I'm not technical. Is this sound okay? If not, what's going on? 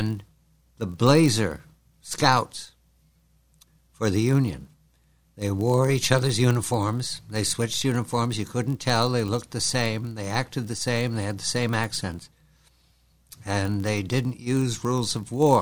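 No. Throughout the clip there's a steady buzz at about 47 Hz, caused by a block size mismatch (padded): each chunk of audio arrives slightly short, and the gap is filled with silence. The buzz rate fits a 1024-sample block. Unlike random dropouts, these gaps are perfectly regular.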